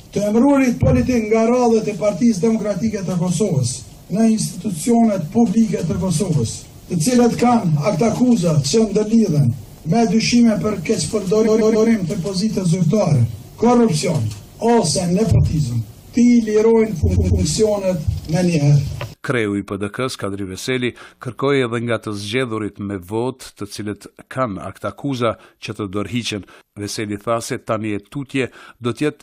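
A run of compressed frames was delivered to the decoder more than once, producing repeated frames at 11.46 s and again at 17.15 s. Each time, a 139.3 ms block, which fits a group of about six frames, plays back to back: three extra times up to 11.88 s, adding 418 ms, and twice more up to 17.43 s, adding 278.6 ms. The sound stutters in place.

From 20.01 s to 21.96 s, switching spikes from an unshielded or dimmer-driven mains path leak into the signal, producing mains buzz. Sharp pulses arrive twice per 60 Hz cycle, so the interference carries a dense ladder of 60 Hz harmonics reaching into the kilohertz range. It sits faintly, well below the main sound, as a steady, raspy buzz lasting just under two seconds.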